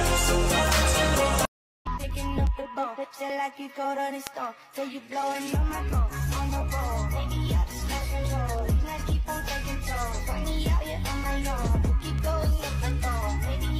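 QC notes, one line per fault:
0.13–13.62 s, word clock ticks: sharp ticks recur about every 0.2 s, around seventy in all. The receiving device runs on its own clock, not locked to the sender's, with a mismatch of roughly 100 ppm. At each slip, a single sample is dropped or repeated, producing a click.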